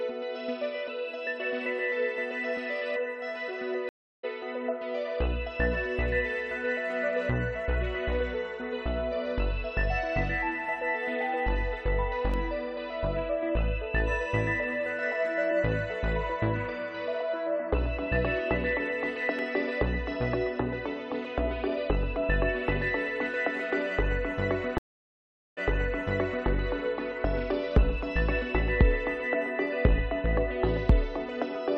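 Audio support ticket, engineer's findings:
Dropout 3.89 to 4.25 s: 0.34 s of silence, then the sound picks up roughly a fifth of a second further on. Stream reconnect; link dropped, player re-established the stream and restarted the decoder at the live position, skipping the gap.

Dropout 24.78 to 26.47 s: 0.79 s of silence, then material from 0.91 s earlier plays again. Stream reconnect; server resent buffered audio to the fresh decoder.

Single clicks at 12.34 s and 19.39 s. Repeated buffer in output stage; a 1.33 ms block played one extra time with hard joins, fitting a 64-sample buffer underrun.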